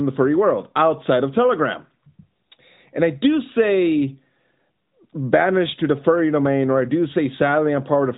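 No technical faults can be heard anywhere in the speech. The mobile-codec path is audible as a narrowband sound with nothing above 4 kHz and only light coding texture, which fits AMR-NB at its 12.2 kbps mode.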